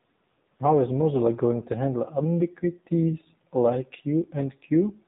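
From start to end, the speech carries AMR narrowband mobile codec damage. Nothing above 4 kHz survives, so it sounds thin and phone-like. Each 5 ms rebuilds the voice from a vocal-tract model and a few pulses. It sounds plainly buzzy and synthetic, which fits a low rate near 7.4 kbps.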